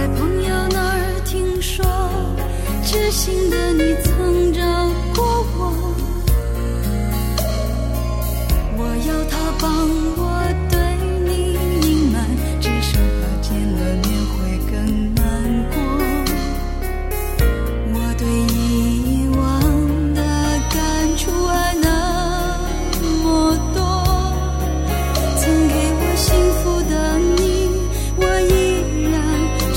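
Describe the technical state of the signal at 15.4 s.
At 15.4 s the signal is intact, with no audible fault at that moment.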